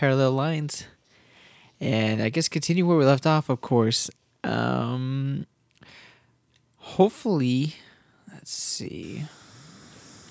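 No technical faults are audible.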